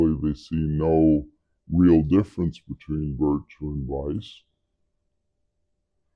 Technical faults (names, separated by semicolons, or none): wrong sample rate